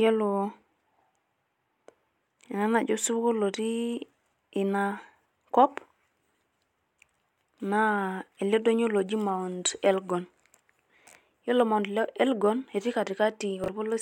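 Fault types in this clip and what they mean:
Chunks out of order: two 20 ms blocks of the speech reached the output one slot late, so each played after the block that should have followed it, with nothing dropped. Each swap spans about 40 ms, at 5.26 to 5.30 s and again at 13.64 to 13.68 s. The reversed pair forms three abrupt joins, so each spot is heard as a brief jumbled flicker rather than as a gap.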